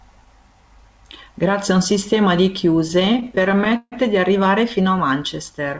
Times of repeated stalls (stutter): 2.88-3.94

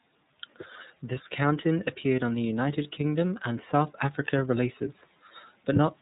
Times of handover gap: none

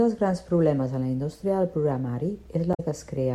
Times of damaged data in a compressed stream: 2.71-2.80

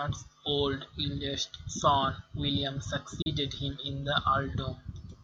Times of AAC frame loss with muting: 3.22-3.27

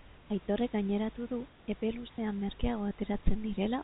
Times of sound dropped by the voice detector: 0.46, 1.80-1.82

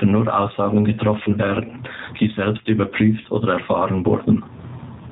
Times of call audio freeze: none

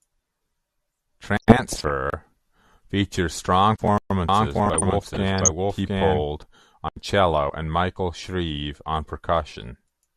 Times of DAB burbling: 1.40-1.90, 4.66-5.52

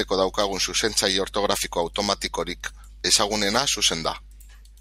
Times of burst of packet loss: none

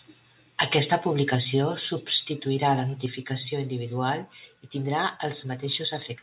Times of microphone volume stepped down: 1.35, 3.06

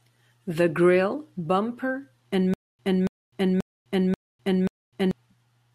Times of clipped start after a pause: none

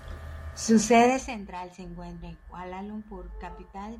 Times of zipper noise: 1.05-1.39

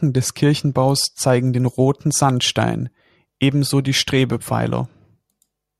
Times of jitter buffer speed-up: none

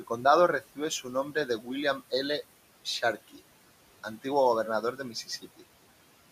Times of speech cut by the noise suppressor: 0.61-1.69, 3.28-3.40, 4.82-5.62

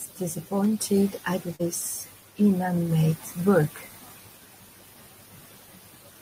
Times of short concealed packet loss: 1.55-1.61

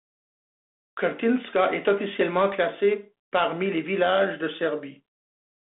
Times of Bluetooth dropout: none

